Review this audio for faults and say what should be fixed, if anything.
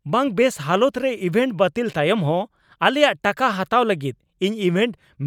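No faults; nothing needs fixing.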